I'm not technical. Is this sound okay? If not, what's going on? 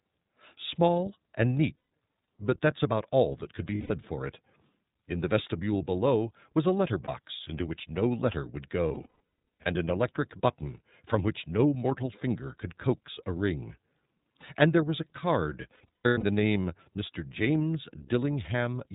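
No. The iLBC codec runs through the whole recording, squeezing the speech into a narrow phone-style band with nothing above 4 kHz. It cuts the sound into 30 ms slices and rebuilds each one separately, which is why it sounds dull, slightly rough and synthetic.

Lost iLBC frames cause brief glitches where pieces of sound went missing in transit, and the player covered each gap by repeating the last bit of tone with some noise, giving a short buzzy, held hum. This happens at 1.77 s for about 150 ms, at 3.75 s after "all that could be" for about 150 ms, and at 7.05 s after "below was a letter" for 30 ms. From 8.88 to 9.67 s, after "which no letter would", losses totalling 540 ms are scattered in bursts. Between 15.75 and 16.23 s, scattered losses total 330 ms. Each time, the speech recovers almost immediately.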